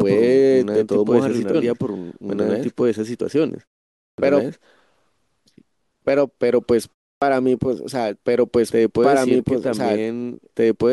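A second capture path, or an edit holding two copies out of step, has likely mixed the speech in twice. Throughout the clip, a full-band copy of the speech trails the original by about two seconds at roughly equal loudness. It has no decay or room colour, so this doubled audio track sounds like two identical voices talking over each other, offset in time, rather than an echo.

At 1.53 s, damaged data in the compressed stream makes the decoder misread a frame, lose sync and hunt for the next frame header. The result is a brief glitch, lasting under 20 ms.

At 4.14 s and again at 7.18 s, the output device has dropped into sleep during silence and needs time to wake and lock again. Each time, the sound after the pause is swallowed: about 42 ms after a 0.55 s pause, then about 37 ms after a 0.32 s pause. This clipped start after a pause makes the speech begin abruptly out of silence, missing its opening sounds.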